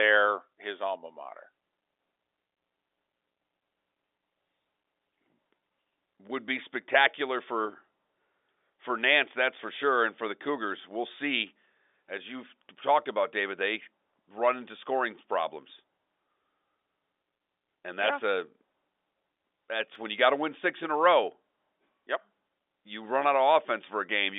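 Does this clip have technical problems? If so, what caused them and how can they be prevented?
Yes. At 19.95 s the speech drops out for about 2 ms. This is a block of digital silence. Samples were replaced by zeros, and the sound jumps straight to zero and back with no fade. With a gap this short, the two hard edges merge into a single tick rather than an audible hole. A short hole like this points to an output buffer that was not filled in time. The telephone band, topping out near 3.7 kHz, stays the same across the tick. To prevent it, give the audio process larger buffers or higher scheduling priority so it never falls behind.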